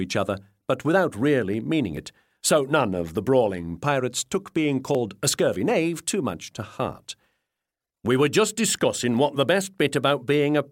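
Audio missing between chunks at 1.97 s and 4.95 s, three seconds apart: likely a chunked recorder dropping about 20 ms at each joint, heard as small skips.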